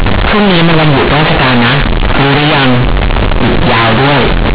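From start to finish, the A-law bytes are being played as plain linear 8-bit samples, so the companded audio is read as linear with no expansion step. The telephone coding itself, G.711 A-law at 8,000 samples a second, is intact underneath. Because each sign change now jumps across roughly half the output range, quiet passages come out as large as loud ones and the speech waveform is badly bent, giving a harsh, very loud buzz with heavy noise filling the pauses.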